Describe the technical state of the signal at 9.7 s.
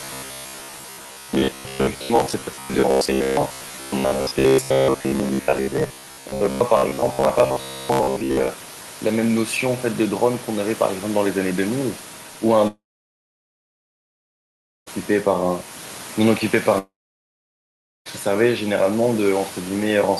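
At 9.7 s the speech signal is intact, with only the room's own background noise sitting about 19 dB below it.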